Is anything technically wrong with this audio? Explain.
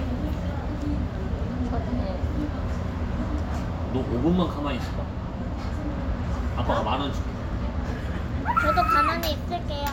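No, nothing technically wrong turns up anywhere in this audio.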